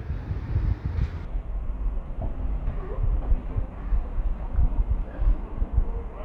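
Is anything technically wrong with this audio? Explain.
Yes. From 1.25 s to the end, the section plays at the wrong speed, running at 0.556 times its proper rate, likely because it was resampled or played back against the wrong clock. Because speed and pitch are locked together, the sound suddenly turns slow and heavy, dropping roughly ten semitones. On a spectrogram, every harmonic band shifts downward at 1.25 s and the events spread out in time. The waveform's cycles visibly lengthen at that point.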